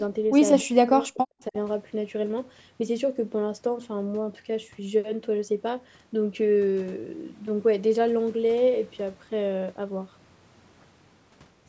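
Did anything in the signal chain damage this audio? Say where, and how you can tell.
Yes. Between 0.62 and 1.55 s the speech drops away in pieces by roughly 40 dB, likely speech suppressed in double talk by the call's echo canceller. The waveform shows chunks collapsing toward silence, and the spectrogram, which tops out at 8 kHz, shows broken, thinned energy there.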